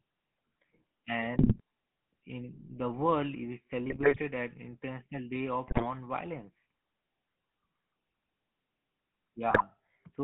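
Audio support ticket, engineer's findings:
GSM full-rate codec across the whole clip: excitation coded as sparse regular pulses through a vocal-tract model, line band about 150 Hz to 3.4 kHz. Speech sounds buzzy and gravelly, plainly audible, consistent with 13 kbps full rate.

GSM bit errors at 1.38–1.60 s, 3.89–4.19 s, 5.68–5.87 s and 9.49–9.63 s: corrupted filter, pitch and gain parameters reaching the decoder. Speech breaks into squawks, pops and gargling; 5.68 s burst densest.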